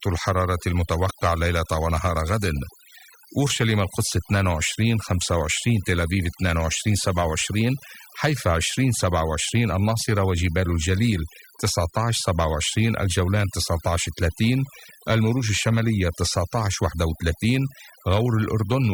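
Overdone noise removal runs throughout the speech: bands near the noise estimate are cut hard, leaving near-silent gaps with twinkling specks.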